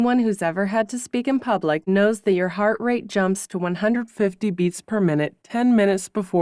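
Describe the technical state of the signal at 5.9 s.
At 5.9 s the signal is inside a wrong sample rate fault running from 3.96 s, just after "heart rate jumps to", to the end. Playback without conversion runs at 0.919 times speed, dropping pitch about 1.5 semitones, consistent with 24 kHz material played at 22 kHz.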